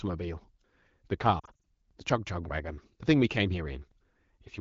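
Between 1.40 and 1.65 s the speech breaks into a cluster of brief dips and warbles, with sound briefly smeared and thinned before recovering. These are lost AMR speech frames: 140 ms of speech went missing across 240 ms, with the longest gap only 40 ms, which fits about seven lost frames. The AMR wideband (HD Voice) decoder at 12.65 kbit/s filled each gap by extending the previous sound at falling gain.

At 3.91 s there is a click and stutter as about 7 ms of sound plays twice. This is overlapping chunks: the audio was handled in 2-second chunks, and the next chunk began slightly before the previous one ended, so that sliver repeats at the join.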